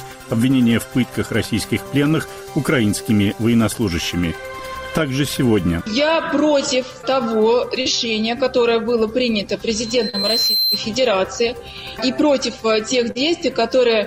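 Brief smears at 3.23, 7.01 and 7.81 s are short concealed packet loss: gaps of 20 to 40 ms arrived too late for the decoder, which stretched the preceding sound across each hole before blending back. A thin 4.1 kHz tone swells from 9.71 s over roughly a second until it matches the programme level, then stops at 10.85 s. This is a loudspeaker feedback squeal, where the microphone re-captured its own loudspeaker and the loop gain exceeded one at that frequency. Another 40 ms concealed loss smears the sound at 10.09 s, during the squeal, and a last one follows at 13.11 s.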